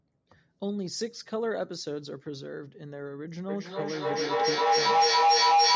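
At 3.48 s a feedback howl begins and runs to the end of the clip. Two devices on the same call were sharing one room. Each pass from loudspeaker back into microphone added level. The repeats grew instead of dying away. They narrowed to a tone near 700 Hz. The howl pulses roughly every 300 ms, the loop's delay. At its peak it sits about 11 dB above the speech. It never stops, because nothing broke the loop.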